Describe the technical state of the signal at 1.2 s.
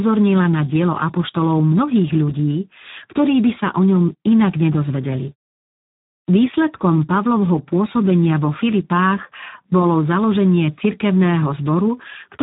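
At 1.2 s the speech carries Speex codec damage, as it does for the whole clip. This CELP codec is running at a very low setting, which fits a bitrate of about 8 kbps. Too few bits are left to describe the excitation signal. The damage is heavy. The speech sounds hoarse and noisy. Nothing is present above 3.8 kHz, so the sound is narrow and muffled.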